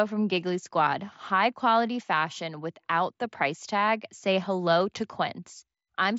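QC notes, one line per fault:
No faults found in this speech recording.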